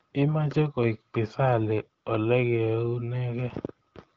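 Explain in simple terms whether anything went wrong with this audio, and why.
Nothing stood out on listening to this speech, which comes across the way a call over an HD Voice phone line normally does, with nothing sounding broken, cut off or out of place at any point.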